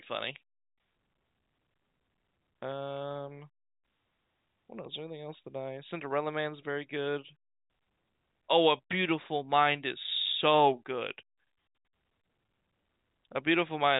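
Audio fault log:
12.46 to 12.48 s, packet loss with pitch repetition: about 20 ms goes missing, which fits a single lost packet, and the receiver repeats the last pitch period, so you hear a brief held, buzzy tone through the G.711 telephone coding's band-limited sound.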